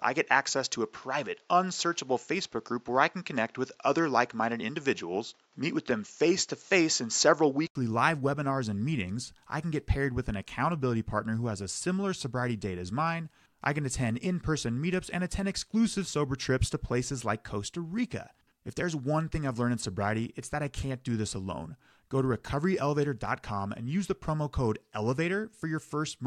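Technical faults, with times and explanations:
0.00–7.75 s, input switched to a poorer device: dull sound with nothing above 7.6 kHz and faint background noise, likely a lesser microphone; an 80 ms gap and roughly 5 dB step mark the switch.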